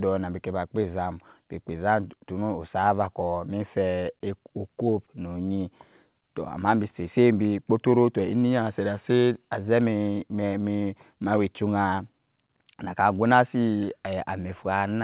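No technical faults can be heard in this speech clip. It has the narrow sound of a telephone-band call codec, with nothing above 4 kHz, which fits G.711 mu-law at 64 kbps.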